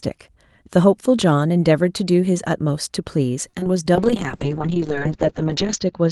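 A short stall from a late packet occurs at 3.49 to 3.55 s. The packet arrived late, the jitter buffer ran dry, and the receiver stretched the last sound for about 39 ms before resuming where it left off. Nothing is lost, but the sound hangs slightly too long.

Short concealed packet loss follows twice, at 3.59 to 3.64 s and 3.64 to 3.67 s, with 20 ms missing each time. The receiver extrapolated from the preceding sound for 23 ms and then 16 ms before blending back, leaving a brief smear or wobble.

A call bitrate drop begins at 3.96 s and lasts to the end. The bandwidth estimate fell, and the Opus encoder went from 32 kbps to 7 kbps for about 1.8 s. Coarser coding and a cutoff lowered from 12 kHz to 8 kHz make the speech sound rougher and duller.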